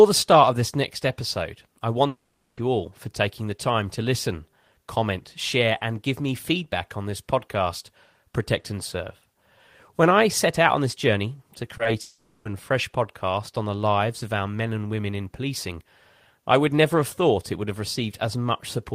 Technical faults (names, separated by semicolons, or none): long network dropout; short concealed packet loss